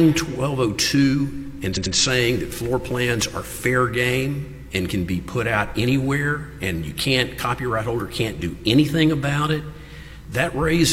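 The audio has a repeated-frames fault between 1.72 and 1.91 s: a block of about 93 ms, which fits two compressed frames, plays two extra times. The result is an audible stutter, and the clip runs about 186 ms longer than it should.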